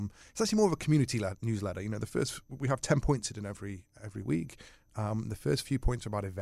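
Nothing in this speech recording stands out as a technical fault; it runs without any dropout, glitch or distortion worth pointing to.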